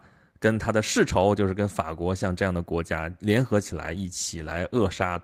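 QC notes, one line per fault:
3.82–5.24 s, call bitrate drop: the speech turns rough and watery from 3.82 s to the end and never recovers. The encoder has less data per second, so detail is coded coarsely. This fits a fall from 32 to 15 kbps.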